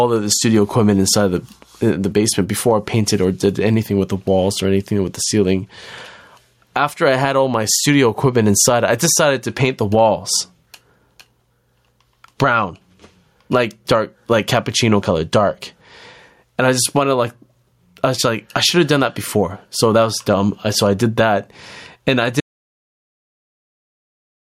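Speech, and the whole clip has gain pumping: the gain swings by around 15 dB, likely from gain set too high with a fast limiter clamping down. Then at 22.40 s, right after "did that and I", there's an audio dropout to silence, with no room tone, running to the end, likely from the input being lost while recording carried on.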